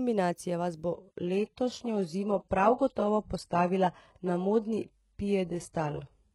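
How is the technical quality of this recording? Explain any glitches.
The quality drops sharply early on. From 0.93 s, just after "vas bo", to the end, the adaptive stream switches to a lower bitrate, which points to a step down from roughly 96 kbit/s to about 12 kbit/s. Nothing is heard above 11.5 kHz. Unlike a dropout, the switch is instant with no gap.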